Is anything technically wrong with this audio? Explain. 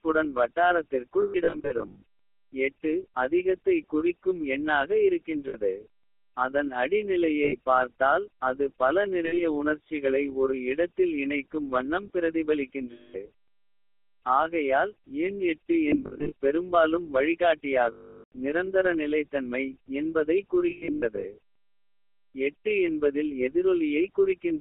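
Yes. Two related faults are present.

The whole clip carries the GSM full-rate codec. The coder rebuilds speech from a vocal-tract model excited by sparse, regularly spaced pulses, which gives this plainly audible buzzy, gravelly roughness, matching the 13 kbps full-rate scheme. The line band runs about 300 Hz to 3.6 kHz, so nothing bright survives. What separates it from simple band-limiting is that roughness: a plain telephone filter sounds thin but smooth, not grainy.

Lost GSM frames occur at 1.22 to 2.02 s, 5.48 to 5.55 s, 7.44 to 7.56 s, 9.26 to 9.41 s, 12.92 to 13.29 s, 15.88 to 16.32 s, 17.92 to 18.32 s and 20.70 to 21.35 s. At each, the decoder reuses the last good frame's settings, so the sound freezes into a rough metallic ring. The gaps run from 60 ms up to 440 ms. The events at 1.22, 15.88 and 20.70 s are scattered, with the longest runs around 0.1 s at 1.22 and 20.70 s and about 70 ms at 15.88 s. 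The unbroken 400 ms loss at 17.92 s fades toward silence. Unlike a dropout or a hard mute, the sound lingers and decays instead of cutting off cleanly.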